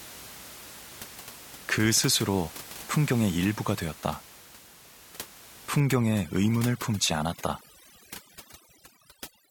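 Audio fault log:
5.80–9.51 s, overdone noise removal: noise reduction set too aggressively strips frequency bands sitting near its noise estimate, so the room noise (about 18 dB below the speech before this point) drops and breaks up into twinkling specks, and quieter speech components vanish with it.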